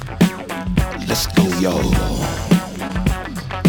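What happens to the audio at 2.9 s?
At about 2.87 to 2.91 s there is a short concealed packet loss. About 20 ms of audio never arrived in time, and the receiver covered the hole by extending the preceding sound for roughly 17 ms before blending back into the real signal. It comes across as a brief smear or wobble rather than a hard click. Unlike an unconcealed dropout, the gap is not heard as silence, because the missing stretch is patched over with continued sound.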